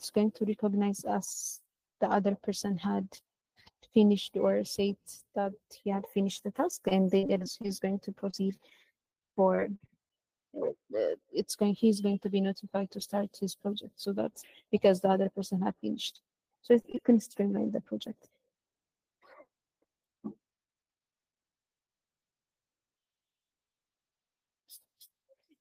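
The audio has two stretches of packet loss. From 6.71 to 10.11 s there is repeated packet loss, giving a robotic sound. About eighteen short holes follow one another closely. None is longer than 40 ms. The receiver fills each hole by stretching the last bit of sound. Those patches add up to 360 ms, about 11% of the stretch. The quick chain of copied fragments sounds choppy and robotic. From 15.31 to 16.98 s there are scattered short gaps. A handful of isolated holes appear, each around 20 ms or less. The patching totals about a tenth of a second, roughly a twentieth of that span. Here the sound stays clear but carries brief ticks and small hiccups.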